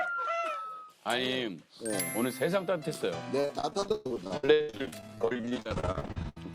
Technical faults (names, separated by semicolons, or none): repeated packet loss (robotic sound)